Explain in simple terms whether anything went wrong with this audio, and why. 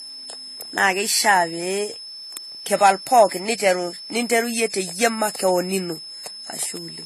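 Switching supply whistle, present from start to finish: a thin, high whistle sits behind the speech, wandering slightly between about 5.19 and 5.28 kHz. A switching power supply in or near the recording gear was cycling on and off fast enough to be heard, and that on-off hum leaked into the signal. The small pitch drift comes from the supply reacting as its load shifts.

Transcoding between lossy codecs, also throughout: the sound has nothing above 14 kHz, so it is dull at the very top, and the speech carries the mixed flaws of more than one compression pass heard together. This points to the audio having been squeezed into one compressed format and then compressed again into a different one, likely ending as AAC. Each pass wastes effort re-encoding the previous pass's damage, so the flaws pile up and the lowest treble limit remains.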